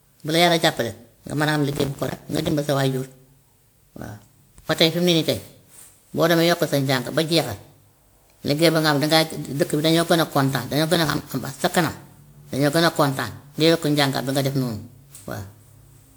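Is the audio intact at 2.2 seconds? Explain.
No. From 1.73 to 2.51 s, processor overload crackle: the processor misses deadlines for many short buffers, which fits buffers of around 5 ms, and each miss leaves a silent gap, tearing the speech into gritty crackle. Throughout, the speech also sounds swirly, smeared and hollow, with blurred attacks, likely generation loss from roughly ten passes through a 128 kbit/s WMA codec.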